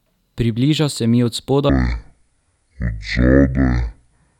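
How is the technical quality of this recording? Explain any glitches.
The recording has one clear fault. Section at the wrong speed, from 1.69 s to the end at 4.40 s: the speech plays at half speed, likely from being clocked wrongly, so it drags and drops about ten semitones deep.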